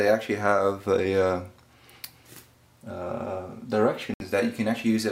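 At 4.14 s the sound cuts out for 64 ms and resumes at 4.21 s as if it had played on. This is likely a Bluetooth dropout from late packets, with a gap that fits about three lost frames. Waveform and spectrogram show a flat blank band.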